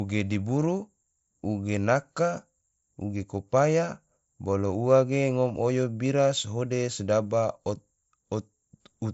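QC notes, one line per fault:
No faults heard anywhere in the speech.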